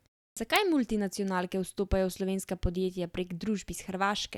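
The output device dropped into a sleep state during the opening 0.33 s of silence and needed time to wake, producing a clipped start after a pause. From 0.33 to 0.37 s, about 36 ms of speech is lost, so the first sound bursts in abruptly, missing its onset.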